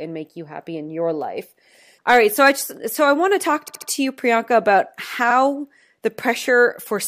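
A run of compressed frames was delivered twice or more, so the decoder replays the same slice of speech. From 3.67 to 3.88 s, a 69.7 ms block plays three extra times, a stutter that adds 209 ms, which fits a run of three frames. At 5.30 to 5.34 s, a 46.4 ms block repeats once, a brief hiccup adding 46.4 ms, which fits a two-frame run.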